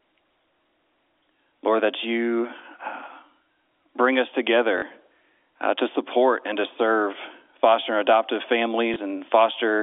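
Packet loss with last packet repeated occurs at 4.78 to 4.82 s, just after "bring us", and at 8.94 to 8.96 s, after "serve foster and adoptive". Missing audio was filled by replaying the previous chunk. The first run stutters robotically and the single repeat at 8.94 s is a small blip; the 40 ms gap fits two 20 ms packets.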